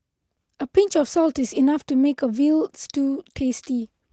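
There are no technical faults to describe in this speech recording, so there is nothing to place in time order.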